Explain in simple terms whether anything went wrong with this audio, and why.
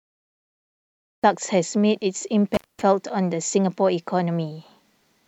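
Two things went wrong. The first is a cut-off start. For the first 1.24 seconds there is only digital silence, and then the speech begins abruptly in the middle of a sound, with no natural lead-in. The recording started late, so the opening was never captured.

The second is an intermittent contact. From 2.54 to 2.82 seconds the speech drops out for about 0.22 seconds. There is crackle at each edge and faint hiss in the gap. This is what happens when a loose cable or plug briefly loses its connection.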